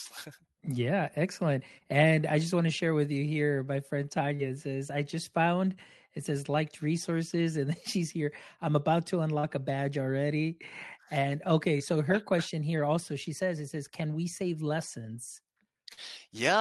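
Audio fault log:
4.35–4.41 s, 9.39–9.45 s and 15.93–15.99 s, short concealed packet loss: Each time about 40 ms of audio failed to reach the decoder in time. The receiver bridged the gap by extending the preceding sound, following its pitch where it was voiced and using shaped noise where it was not, for roughly 35 to 41 ms before fading back into the real signal. That synthetic stretch is heard as a brief smear or wobble, and a short consonant can disappear inside it.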